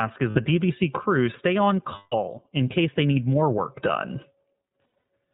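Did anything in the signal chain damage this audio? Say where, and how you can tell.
Yes. The audio is band-limited with nothing above 4 kHz and has a rough, slightly synthetic edge throughout. That points to the iLBC codec at the codec stage, likely around 15.2 kbps with 20 ms frames. Each frame's excitation is coded independently, and the low-rate coding gives that rough, synthetic texture.

There are also lost iLBC frames at the network stage. At 0.30 to 0.38 s there is a short held, slightly buzzy or breathy vowel. Another runs from 1.96 to 2.15 s, after "crew stay on" and before "in case they need", and the fill fades over its roughly 160 ms. From 4.84 to 5.04 s, several brief gaps are scattered over 200 ms, the longest around 70 ms. The decoder fills each gap by repeating the last pitch cycle mixed with noise. Because each frame stands alone, the sound recovers almost immediately afterwards.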